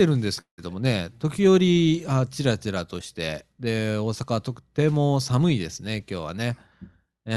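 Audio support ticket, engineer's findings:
Short concealed packet loss, 0.35–0.39 s: brief smear or wobble on the speech. About 20 ms never reached the decoder in time; the jitter buffer/decoder bridged roughly 13 ms by extending the preceding sound. Spectrogram: smeared harmonics.

Long network dropout, 0.41–0.60 s: sound continues as a fading buzz or hiss, then goes quiet for about 100 ms before speech resumes with a piece gone. Likely a network outage. Roughly 180 ms missing, about 170 ms synthesized. Spectrogram: decaying smudge, then blank band. Waveform: tapering envelope, flat gap.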